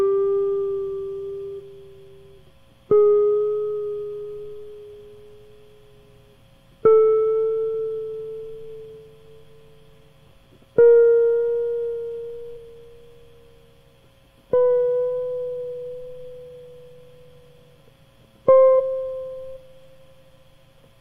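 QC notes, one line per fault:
1.56–1.61 s, 12.52 s, 18.75–18.81 s, 19.52–19.58 s: compressed frames skipped. The music jumps forward by whole 42.7 ms frames, roughly 0.7 s, 0.3 s, 0.5 s and 0.7 s lost.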